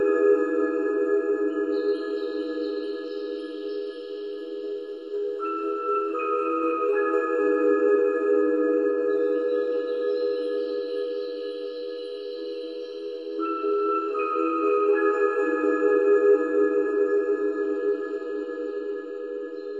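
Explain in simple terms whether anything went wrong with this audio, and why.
Channel delay, causing comb filtering, runs through the whole clip. One channel arrives slightly less than a millisecond late, and when both are mixed together, matching parts cancel at evenly spaced pitches starting around 700 Hz. That leaves the sound hollow and phasey throughout.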